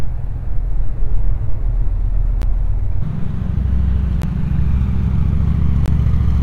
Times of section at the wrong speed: 0.00-3.02

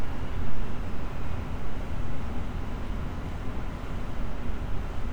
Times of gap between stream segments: none

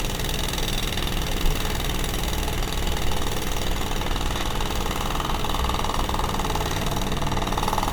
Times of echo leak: none

